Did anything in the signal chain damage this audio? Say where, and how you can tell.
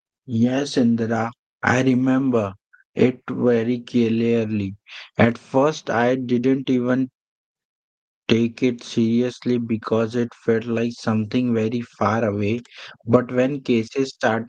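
No, nothing in the signal chain damaged this audio.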